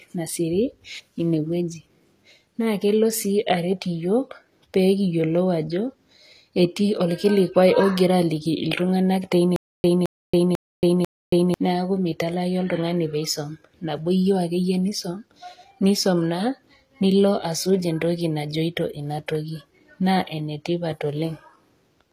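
Speech with gritty, lispy s sounds and nothing above 14.9 kHz, likely HE-AAC compression at a low bitrate near 24 kbps; unlike plain lowpassing, the treble stays bright but synthetic. From 9.56 to 11.54 s comes a stutter with silent gaps: one 0.22 s burst repeats four times, separated by 0.28 s of digital silence, most likely a stalled stream replaying its last fragment, unlike a glitch loop, which has no gaps.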